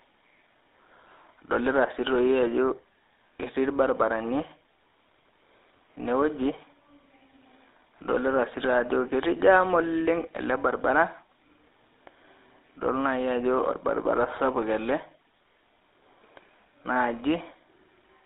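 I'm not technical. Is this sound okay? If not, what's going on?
No. Throughout, the speech has the buzzy, gravelly roughness of the GSM full-rate codec, an old mobile-phone format, not just the thin but clean sound of a landline.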